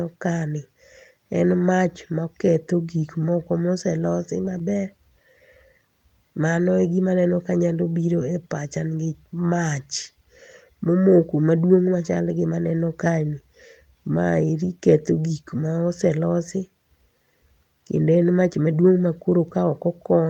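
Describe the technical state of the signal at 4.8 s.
At 4.8 s the speech sits within a stretch of scattered short gaps, 4.45 to 5.13 s: a handful of lost packets, none much beyond 15 ms, patched by extending the preceding sound. Unlike a true dropout, nothing goes silent; listeners hear only brief ticks and smears.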